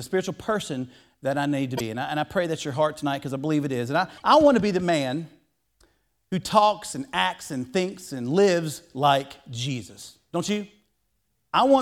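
Right after "that I need to", from 1.77 to 1.81 s, the speech jumps forward. A second skip comes at 4.17 to 4.22 s, just before "I want to be". Both point to a likely broken MP3 bit reservoir: frames of about 26.1 ms went missing, so the following frames reached back for borrowed data and decoded bytes belonging to other frames.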